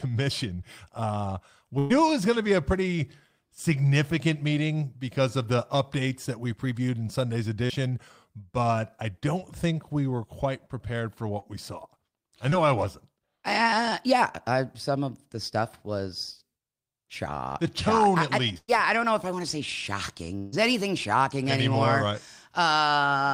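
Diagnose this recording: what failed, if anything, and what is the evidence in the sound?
Brief smears and wobbles break into the speech at 0.55 s, 7.66 s, 11.40 s (just after "were quite prepared for") and 12.50 s (just before "I wasn't"), each covering about 20 to 40 ms. This is short concealed packet loss on the network path. Small pieces of the stream arrived too late for the decoder, which filled each gap by extending the preceding sound, then blended back into the real signal.

Longer dropouts are heard at 1.79 to 1.92 s (just before "it was going to"), 18.58 to 18.70 s and 20.38 to 20.54 s. In each, the sound freezes into a held buzz or fading hiss before the speech picks up further on, with roughly 100 to 140 ms of the speech gone. At 18.58 s the fill dies away into about 30 ms of silence before the audio returns. These are bursts of packet loss, also on the network. Several consecutive packets went missing, and the receiver stretched the last sound while turning it down.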